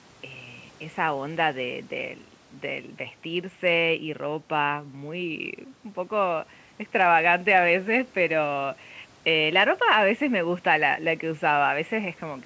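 The speech has passed through a call's microphone processing, which trims away the lowest bass and leaves nothing above 8 kHz, and no technical fault can be heard in the signal.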